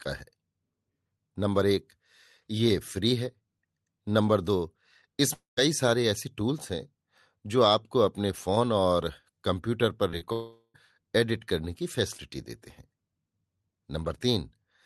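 At 5.33 to 5.59 s there is a long network dropout, likely from a stretch of audio that never arrived. About 240 ms is missing. The receiver extends the last sound as a fading buzz or hiss, which gives way to about 150 ms of silence before the speech resumes further on.

Short concealed packet loss follows at 10.11, 10.18 and 10.25 s. Each time about 20 ms failed to reach the decoder. The gap was patched by continuing the previous sound and then blending back, which produces brief smears lasting roughly 11 to 29 ms.

A second long network dropout runs from 10.33 to 10.76 s and removes about 420 ms. The same fading continuation fills most of it, with about 50 ms of silence before the audio returns past the lost part. The Opus coding noise and the cutoff near 12 kHz fit a call path at around 32 kbps.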